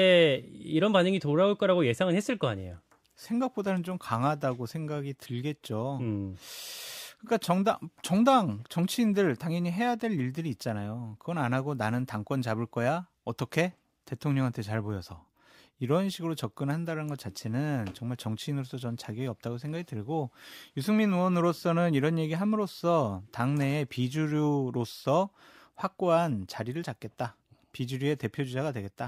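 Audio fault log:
No technical faults can be heard anywhere in the speech recording.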